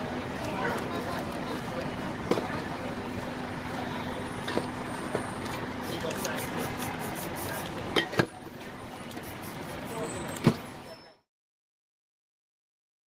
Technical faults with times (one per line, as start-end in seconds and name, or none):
none